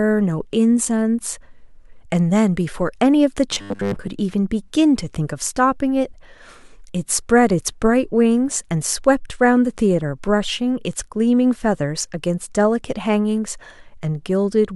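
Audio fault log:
3.53–4.08 s, robotic sound from repeated short buffers: across this half-second stretch the speech collapses into a rigid, metallic buzz pinned at 100 Hz, still loosely tracking the rhythm of the words. The likely cause is audio arriving too slowly, so playback loops a short chunk of about 10 ms to fill the gap while fresh audio is dropped. Most of the stretch is repeated material, and the 10 ms loop length is what imposes the fixed 100 Hz pitch.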